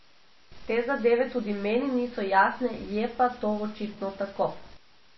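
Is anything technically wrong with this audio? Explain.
Yes, two faults run through the whole of this speech clip.

The first is a stuck bit, heard from start to finish as added noise and distortion riding on the speech. The likely cause is one data bit held permanently at 0 or 1 by a broken line or converter. About half the sample values are then pushed off by that bit's fixed weight, in a pattern that follows the waveform. Because small values near zero also get shifted, the quiet gaps carry noise instead of silence.

The second is MP3 compression, and the damage is plainly audible across the full clip. The audio has nothing above about 5.8 kHz, so sibilants and breathiness are dulled. Together with the watery, swirling texture, this likely points to a low bitrate of around 24 kbps. When the encoder is that short of bits, it cuts the treble at a fixed frequency. It also zeroes weak spectral lines, which then flicker on and off between frames, producing the swirly, underwater quality.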